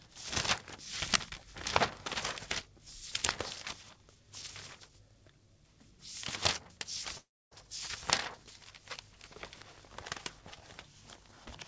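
At 7.18 s the sound breaks off until 7.53 s. A fading buzz covers the gap, then near-silence, likely a long network dropout. About 340 ms never returns.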